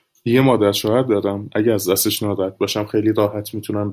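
No audible technical faults occur anywhere in the recording.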